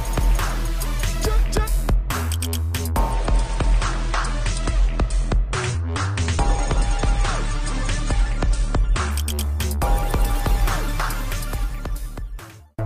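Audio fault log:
3.1 to 9.1 s, adaptive stream at a lower bitrate: the treble abruptly cuts off above 9.7 kHz and codec artefacts thicken, with no gap at either switch. The stream fell back to a leaner version for about 6 s when the connection slowed, which fits AAC dropping from 96 to 32 kbit/s.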